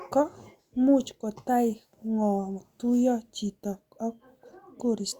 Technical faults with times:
none

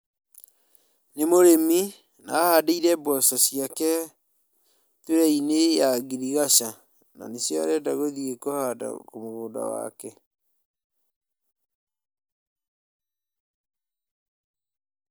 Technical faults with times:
none

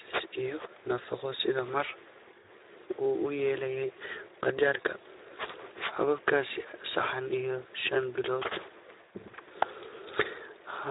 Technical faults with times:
0.00-10.91 Speex codec

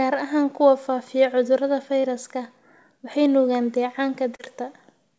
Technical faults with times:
2.00-2.06 short concealed packet loss
4.35-4.42 short concealed packet loss

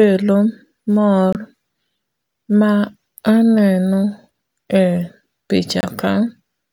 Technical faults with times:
1.33-1.37 corrupt frame muted
5.80-5.85 corrupt frame muted

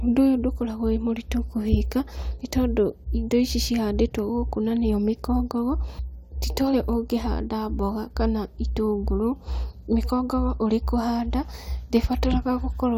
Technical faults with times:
0.00-12.97 mains hum
5.98 stream segment skipped

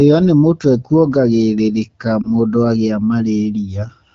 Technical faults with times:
2.22-2.30 lost AMR speech frames

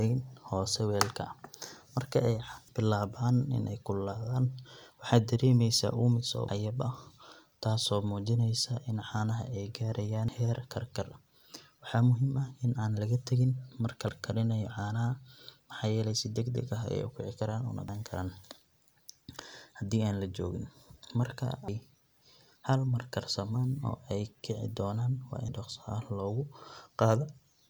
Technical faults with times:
2.68 audio missing between chunks
6.48 audio missing between chunks
10.28 audio missing between chunks
14.08 audio missing between chunks
17.88 audio missing between chunks
21.68 audio missing between chunks
25.48 audio missing between chunks

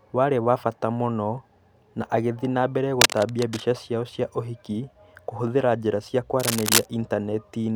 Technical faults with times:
3.00-3.78 cable scratch noise
6.39-6.88 cable scratch noise

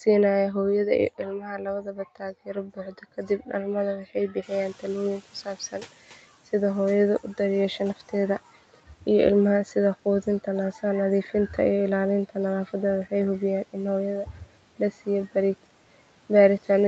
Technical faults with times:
1.18-3.67 speech cut by the noise suppressor
3.96-4.52 speech cut by the noise suppressor
4.42-6.29 noise suppressor catching up
5.45-5.93 speech cut by the noise suppressor
14.25-14.48 speech cut by the noise suppressor

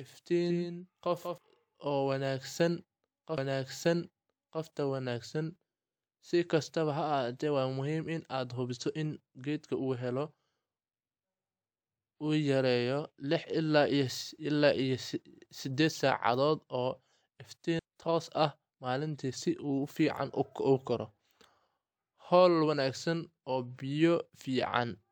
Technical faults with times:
0.00-1.38 doubled audio track
3.37 CD skip
17.79 CD skip

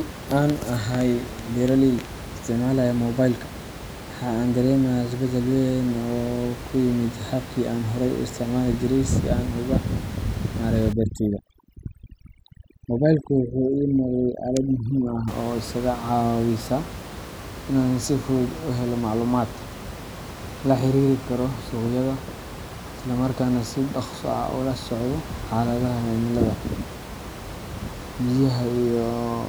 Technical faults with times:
10.93-15.28 overdone noise removal

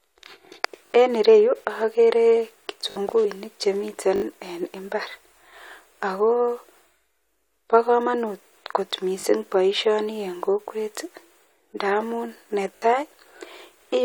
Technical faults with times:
0.86-0.90 repeated buffer
2.90-2.96 repeated buffer
3.24 compressed frames skipped
4.16-4.22 repeated buffer
9.20-9.24 repeated buffer
12.76-12.82 repeated buffer

